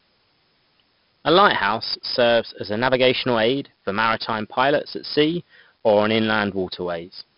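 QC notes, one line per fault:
throughout: 4-bit ADPCM compression, heavy gritty hiss that rises with every loud syllable, with crunched attacks and nothing above 5.3 kHz, which fits a 44 kbps stream; this is level-following grit rather than MP3-style swirl.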